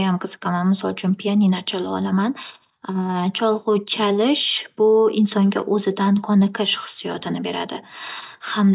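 No technical faults are audible.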